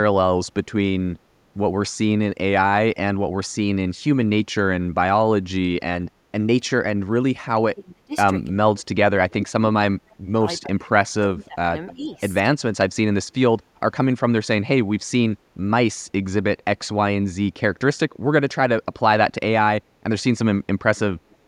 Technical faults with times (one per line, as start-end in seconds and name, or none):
7.47-8.15 speech suppressed in double talk
8.50-10.90 speech suppressed in double talk
11.27-12.11 speech suppressed in double talk
11.88-12.19 echo leak
12.81-12.83 loud pop
21.30-21.36 echo leak